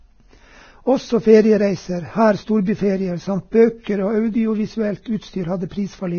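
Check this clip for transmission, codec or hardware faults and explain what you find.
One codec fault runs through the whole speech clip: Vorbis compression. From start to finish the speech sounds hissy and grainy, voiced tones have a gritty edge, and nothing is heard above about 6.6 kHz. The likely cause is heavy Vorbis coding at a very low bitrate, which fits roughly 18 kbps. To save bits the encoder lowered its cut-off and coded the upper band so coarsely that fine detail turned into noise of similar energy, and consonant onsets blurred.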